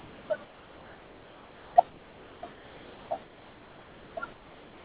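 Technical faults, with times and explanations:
0.0–0.3 s, 0.44–1.76 s, 1.89–2.43 s, 2.53–3.11 s, 3.23–4.17 s and 4.33–4.84 s: sound dropped by the voice detector. The speech gives way to steady, featureless comfort noise, likely because the sender's detector mistook quieter speech for background and stopped sending. Unlike packet-loss concealment, the fill is smooth hiss with no stretched or repeated fragments of speech, and the speech returns when the detector triggers again.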